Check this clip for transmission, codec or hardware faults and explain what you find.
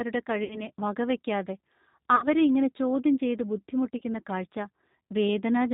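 Two faults are present in this speech. The whole clip runs through the G.729 codec at 8 kbit/s: its filter-and-pulse reconstruction removes everything above 4 kHz and leaves the voice audibly rough and synthetic.

VoIP packet loss concealed by the speech codec occurs at 0.44–0.63 s and 2.16–2.28 s, before "ഇങ്ങനെ ചോദ്യം ചെയ്ത്". A 60 ms gap there fits two lost packets. A shorter 30 ms loss occurs at 3.98–4.02 s, after "ഇങ്ങനെ ചോദ്യം ചെയ്ത്". In each case the decoder stretches its last pitch and filter into a fading buzzy tone or coloured noise, and the voice stays weak briefly afterwards.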